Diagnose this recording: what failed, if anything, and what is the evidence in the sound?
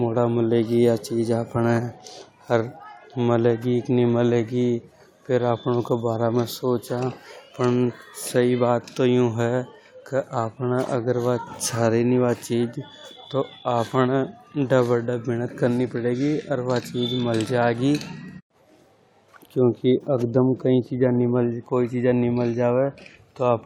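No technical fault is audible.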